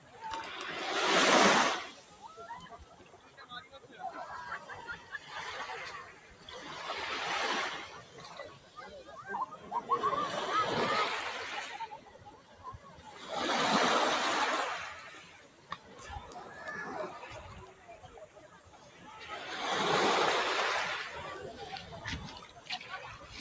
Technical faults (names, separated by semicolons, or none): noise suppressor applied to music or sounds; sound cut by the noise suppressor